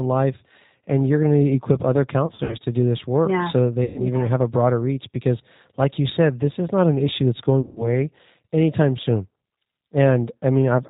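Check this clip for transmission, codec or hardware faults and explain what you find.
Two faults are present: low-bitrate codec coding across the whole speech clip, and three bursts of packet loss that the speech decoder conceals.

G.729 codec damage is plainly audible throughout. Nothing above 4 kHz survives, and the speech sounds rough and slightly synthetic, which fits an 8 kbit/s G.729A codec. It rebuilds each frame from a vocal tract filter, a pitch predictor and a few pulses. That pulse-built graininess separates it from simple band-limiting, which stays smooth.

VoIP packet loss concealed by the speech codec occurs from 2.26 to 2.56 s, 3.84 to 4.00 s and 7.61 to 7.88 s. The decoder extrapolated its last pitch and filter with falling gain, so the speech smears into a buzzy tone or coloured noise that fades, then recovers weakly. In the first burst, about 120 ms was lost in short runs of up to 60 ms, spread over 240 ms. 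The other two bursts lost about 120 ms and 150 ms.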